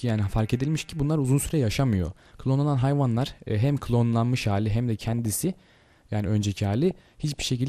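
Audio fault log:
Throughout: MP2 compression. The audio is dull, with a gurgling, granular edge that stays audible the whole time. The likely cause is MPEG Layer II coding at a low rate, which fits something near 80 kbps. The codec divides the spectrum into 32 sub-bands and shares out a tight bit budget, so upper bands drop out or flicker and the surviving bands are quantised coarsely.
2.04–2.34 s, 4.99–5.74 s, 6.91–7.49 s: DAB burbling. In these three stretches, bursts of blips rise over the programme, longest in the middle burst. Bit errors from weak reception have slipped past error correction into the MP2 data. Corrupted samples put short blips of noise in single sub-bands, and corrupted scale factors make sub-bands jump in level for up to a frame. That produces the burbling texture, which points to an error rate of a few tenths of a percent.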